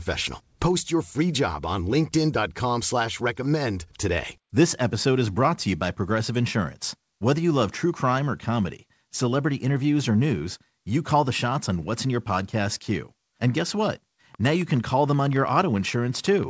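A likely source of interference or a faulty connection starts injecting pulses at 14.35 s, just after "guess what", and keeps on until the end at 16.50 s: a train of clicks at about 7.5 per second, unevenly spaced and peaking a few dB above the speech, heard as an irregular ticking over the call-band audio, which stops at 8 kHz.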